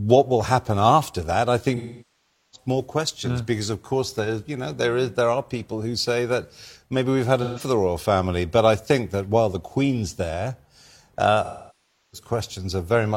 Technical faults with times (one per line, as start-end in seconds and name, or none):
1.76-2.68 AAC frame loss with concealment
7.43-7.60 AAC frame loss with concealment
11.44-12.28 AAC frame loss with concealment